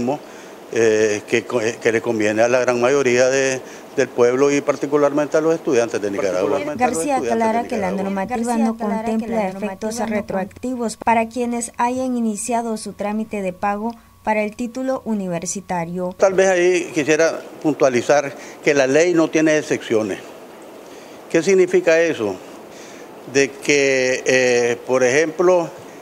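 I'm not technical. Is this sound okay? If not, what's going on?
No. From about 6.1 to 10.6 seconds there is a doubled audio track, likely from the sound being recorded twice. A quieter copy plays about one and a half seconds behind, then stops abruptly.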